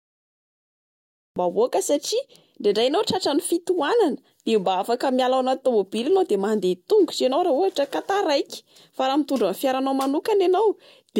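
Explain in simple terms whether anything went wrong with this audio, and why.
Cut-off start at 1.36 seconds: the recording began late, so silence abruptly gives way to speech already underway, with no natural lead-in.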